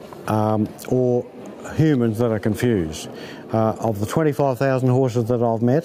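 Gain pumping runs through the whole clip: the level ducks under each loud sound and swells back afterwards, swinging around 10 dB. The likely cause is input gain set far too high, with a fast limiter or compressor clamping down on every loud moment and squashing the dynamics.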